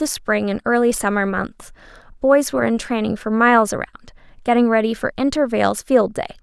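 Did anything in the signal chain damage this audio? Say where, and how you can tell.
No, nothing along the chain seems to have harmed this speech recording, so there's no stage to point to and no damage to explain.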